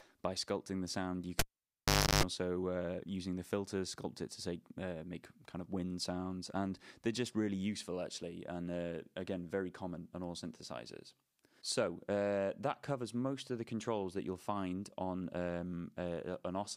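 At 1.39 s a pop cuts the sound to near silence for about 0.79 s, during which a 50 Hz mains buzz runs for about 0.33 s before a second pop at 2.23 s restores it: a cable pulled and plugged in, buzzing while only its tip made contact.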